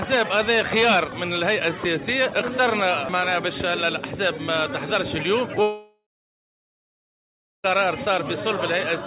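At 5.62 s a likely long network dropout stops audio arriving for about 2 s. The receiver stretches the last sound into a fading buzz, leaving about 1.6 s of near-silence before the audio resumes at 7.66 s, the lost part gone.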